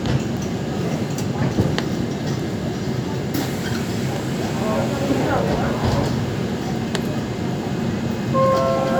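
Nothing in the sound stood out as a technical fault on listening.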